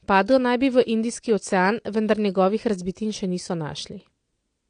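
Throughout the speech there is plainly audible AAC compression damage, likely from AAC-LC coding at a rate that fits roughly 32 kbps. Nothing remains above 9.7 kHz, so the top end is dull. Coarse spectral quantisation leaves sibilants fizzy and sustained sounds smeared and warbling.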